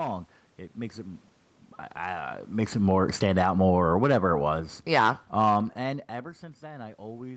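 It's a short piece of speech, and the problem is automatic gain falling: from 2.57 s to 6.16 s the level sags by about 10 dB, the room noise sinking right along with it, because the gain control judged the input too hot or its background noise too strong and eased its gain down.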